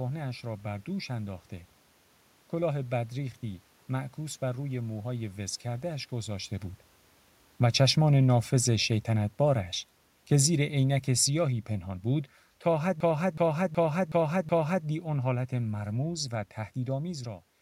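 From 7.59 to 9.72 s, automatic gain falling lowers the level by about 4 dB. The control judged the input too loud, or its background noise too strong, and eased its gain down. The speech and the room noise sink together. From 10.29 to 16.16 s it happens again, dropping about 5 dB.

Inside that second fall, from 13.00 to 14.86 s, a system hang loop appears. The computer stalled while the sound hardware kept replaying its buffer. One 0.37 s piece repeats five times at 2.69 Hz. That makes a skipping-record sound. The loop length fits a 16384-sample buffer.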